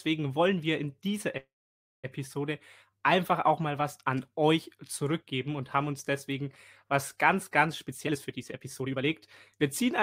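A call audio freeze runs from 1.37 to 2.06 s. The last sound is stretched into a brief fading buzz or hiss, then about 560 ms of silence, before the speech resumes where it left off. The likely cause is delayed packets draining the jitter buffer, inserting a 662 ms gap with nothing lost.

A jitter buffer speed-up follows from 7.86 to 10.02 s. The receiver trims pitch-period-sized slices over and over to shed roughly half a second of backlog, so speech plays at about 122% speed at unchanged pitch and sounds hurried.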